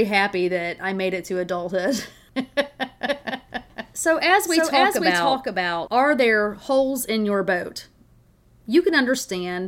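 From 3.07 to 5.87 s a doubled audio track appears: a flat, full-band copy about half a second late and a few dB quieter, likely from a second capture path, cutting off abruptly before "are there holes in", unlike a decaying room echo.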